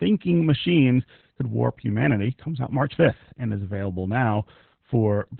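Opus voice compression runs through the whole clip, with nothing above 4.4 kHz. The narrowband SILK coder, apparently at a very low bitrate near 8 kbps, models speech as linear prediction with coarse excitation, leaving heavy damage: muffled, hoarse and robotic-sounding speech.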